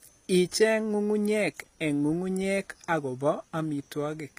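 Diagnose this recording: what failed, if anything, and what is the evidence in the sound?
HE-AAC compression throughout, at the codec stage: the speech is plainly damaged, with s sounds gritty and lispy and nothing above 15.4 kHz. The likely cause is spectral band replication rebuilding the treble from copied lower bands, which fits a low bitrate near 24 kbps.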